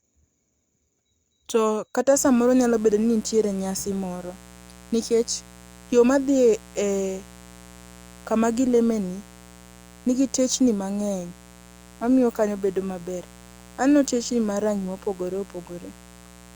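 From 2.15 s to the end of the clip, a mains buzz sits under the speech. It is a steady, raspy drone built on 60 Hz. Sharp switching spikes got into the signal path twice per mains cycle. A dimmer, rectifier or missing shield would do this. Those spikes carry harmonics of 60 Hz well up into the kilohertz range. That gives the buzz its edge. It sits roughly 25 dB below the speech.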